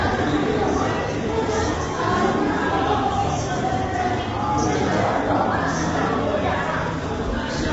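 Throughout the clip, the signal has most likely passed through low-delay AAC compression of the AAC-ELD kind used for video calls, at a bitrate that sounds like roughly 24 kbps. Its short frames trade frequency detail for low delay, and with so few bits the coder smears fine tonal structure. The result is plainly audible: the sound turns rough and grainy, with noise filling gaps in the spectrum, and nothing remains above 7.8 kHz.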